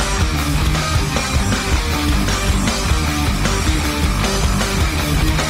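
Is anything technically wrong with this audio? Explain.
Yes. From 1.14 s through to the end, the clip drops to an adaptive stream at a lower bitrate. The player has switched to a cheaper version of the same stream, most likely because the connection slowed, and the change is abrupt with no gap. Coding artefacts become more audible, which fits a step from around 64 kbit/s Opus down to roughly 24 kbit/s.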